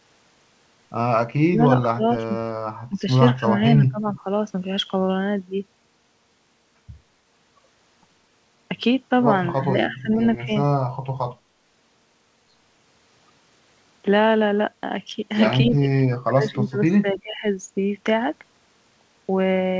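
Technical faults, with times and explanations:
1.49–2.29 s, 2.89–3.07 s, 3.39–4.25 s, 9.55–10.5 s, 15.7–17.44 s: speech suppressed in double talk. The voice dips and breaks into pieces, by up to about 25 dB early on and about 30 dB in the last stretch. The likely cause is the echo canceller turning everything down while the far side talked too.
4.16–4.2 s: echo leak. A brief, faint copy of the voice returns about 256 ms late, about 25 dB below the speech. The likely cause is a loudspeaker-side echo canceller letting a scrap of its microphone's pickup through and sending it back.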